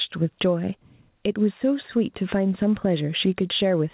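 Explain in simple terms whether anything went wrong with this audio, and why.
Throughout the recording there is gain pumping. Loud and soft parts end up closer in level and the speech sounds squashed, likely from a microphone set too hot and a fast limiter clamping down.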